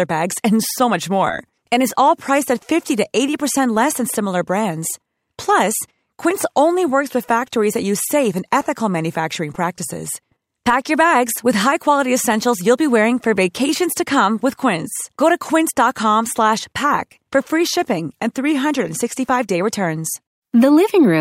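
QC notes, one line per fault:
No faults heard anywhere in the speech.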